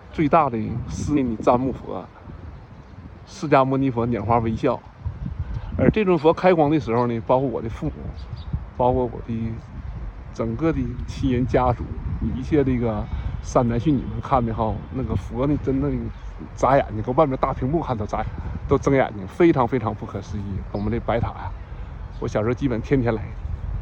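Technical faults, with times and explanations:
1.16–1.18 s, 7.87–7.90 s, 18.21–18.23 s and 20.74 s: damaged data in a compressed stream. Corrupted bytes made the decoder lose frame sync, so each spot gives a brief chirp or blip of about 20 ms.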